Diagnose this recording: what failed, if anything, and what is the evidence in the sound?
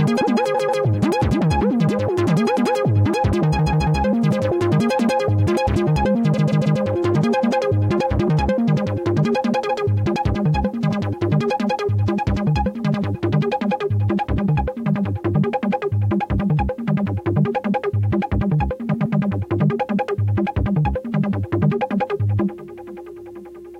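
Repeated frames at the codec or storage stage: blocks of 0.14 s (0.12 s at 18.93 s) replay back to back at 0.54–0.82, 3.58–4.00, 6.36–6.78, 9.69–9.82 and 18.93–19.16 s, heard as a stutter. Unlike dropouts, nothing is lost. Identical chunks play again, lengthening the sound.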